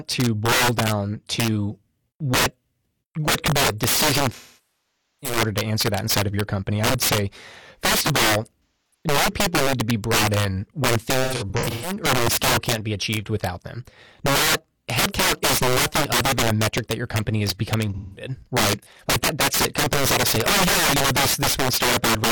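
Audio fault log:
Throughout: integer overflow. Gain pushed the speech about 12 dB past full scale, and instead of limiting, the loudest samples, roughly 7 percent, wrapped around to the opposite sign. Each peak jumps across the whole range, so louder syllables break into harsh cracks far sharper than ordinary clipping.
4.34–5.37 s: AAC frame loss with concealment. Close to a second of coded audio went missing after "could be a decision", which fits a run of about 20 frames. The decoder kept rebuilding sound from the last good spectrum while fading it, so the speech decays to a very faint noise floor, then fades back in at "to answer that inside".
8.64–9.05 s: AAC frame loss with concealment. About 256 ms was lost after "say first of all", and the decoder filled the gap from stale spectral data, producing a smeared, noisy patch before the audio recovers at "new people need to".
11.23–11.94 s: AAC frame loss with concealment. 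The losses here are scattered, about 384 ms missing across roughly 0.6 s, with the longest run around 150 ms. Repeated brief substitutions give a phasey texture as real and synthesized frames alternate.
17.94–18.29 s: AAC frame loss with concealment. Right after "your company is becoming", about 213 ms dropped out. The decoder patched it from the previous spectrum, so that stretch is a blurred, noisy smear.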